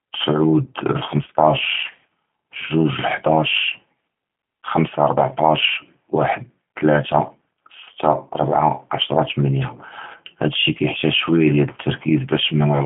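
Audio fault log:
Throughout: G.729 codec. The speech is confined to a telephone band of about 150 Hz to 3.4 kHz, with nothing at all above 3.7 kHz, and carries a plainly audible rough, synthetic texture, which fits an 8 kbit/s G.729A stream. Each 10 ms frame is rebuilt from a vocal tract filter, a pitch predictor and a handful of pulses. That sparse pulse rebuild, rather than simple band-limiting, explains the grainy, artificial edge.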